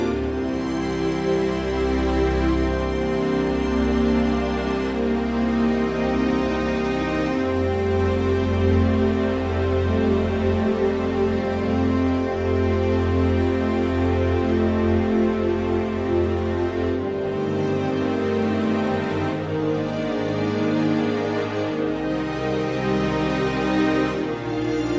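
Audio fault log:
No audible faults were found anywhere in this clip.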